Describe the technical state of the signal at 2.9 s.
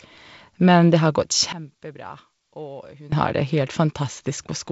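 One channel inverted, from 1.53 to 3.12 s, covers this moment. The drop in level of about 20 dB is likely caused by one stereo side having reversed polarity, so the shared centre of the speech cancels in a mono sum, leaving only a faint residue.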